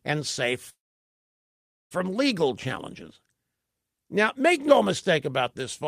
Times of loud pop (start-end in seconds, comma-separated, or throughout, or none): none